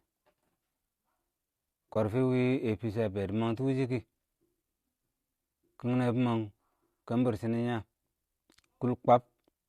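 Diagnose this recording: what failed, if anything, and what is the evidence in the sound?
The failure is AAC frame loss with muting, at the network and decoder stage. In this speech clip, a brief soft-edged gap opens from 1.94 to 1.96 s. It lasts about 20 ms, which fits two lost frames of a low-delay codec. The decoder zeroed the missing spectrum. Its overlapping windows then faded the sound out and back in. The light grain of the surrounding speech is likely from low-delay AAC coding.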